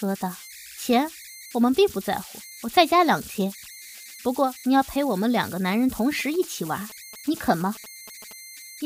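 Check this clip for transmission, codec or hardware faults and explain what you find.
Two faults are present: converter idle tones throughout the speech, and GSM signalling bursts near the end.

Converter idle tones run from start to finish, at about 19 dB below the speech. With no dither, the delta-sigma converter settles into repeating bit patterns whenever its input is small. Here that produces a whistle somewhere around 2 kHz in the pauses and a grainy texture under quiet passages. Unlike a steady external whistle, its pitch depends on the input's offset, which sets the repeating pattern.

GSM signalling bursts appear from 6.19 to 8.33 s, roughly 20 dB below the speech. A nearby 2G phone is sending short groups of radio bursts while signalling, and the audio circuit rectifies them into sound. The result is a galloping dit-dit-dit of brief buzzes at a 217 Hz repeat rate. The gapped, rhythmic grouping separates it from mains hum, which is a continuous tone at 50 or 60 Hz and its harmonics.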